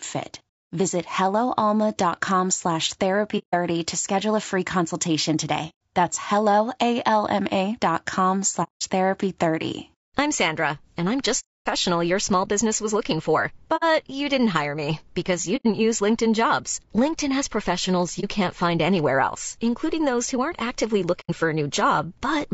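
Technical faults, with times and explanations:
Throughout: low-delay AAC compression. The speech is rough and grainy, with noise filling the gaps between harmonics and a thin, synthetic-sounding top band. This is likely AAC-ELD at about 32 kbps, whose short frames resolve pitch structure poorly and leave too few bits.
3.38–3.54 s, 5.69–5.74 s, 8.63–8.82 s, 11.39–11.66 s, 13.76–13.84 s, 15.56–15.66 s, 18.2 s, 21.2–21.3 s: AAC frame loss with muting. Lost frames were decoded as silence, and the overlapping windows fade the sound out and back in, leaving soft-edged holes, with only a brief dip at 18.2 s.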